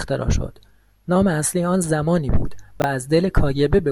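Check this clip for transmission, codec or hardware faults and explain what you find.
There's one fault in this speech clip: chunks out of order, from 2.80 to 2.84 s. Over that 40 ms span, a 20 ms chunk of audio turned up one chunk late, so it plays after the piece that should have followed it. Nothing's actually missing, but the two pieces are swapped, leaving three hard joins in quick succession. You hear a brief jumbled blip in the speech.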